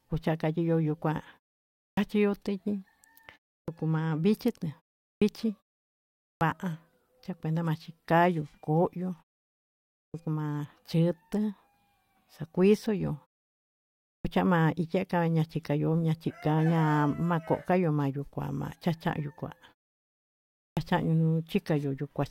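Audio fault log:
1.91, 3.62, 5.15, 6.35, 10.08, 14.19 and 20.71 s: clipped start after a pause. Each follows a silence of 0.32 to 1.05 s. The first 57 to 66 ms of speech is missing. The output device sleeps in the gap and wakes late, so words begin abruptly.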